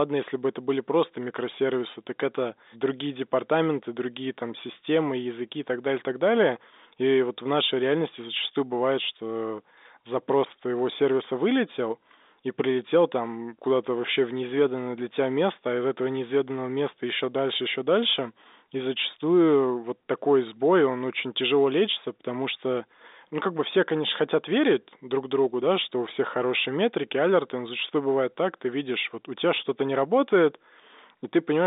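No technical faults can be heard in this speech.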